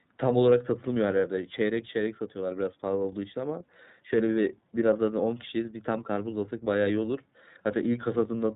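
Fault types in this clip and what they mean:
iLBC codec: the speech runs throughout with nothing above 4 kHz and a plainly rough, slightly synthetic edge. It has been squeezed through the narrowband iLBC VoIP codec, which codes each 30 ms frame's excitation on its own at a rate that fits roughly 13.3 kbps.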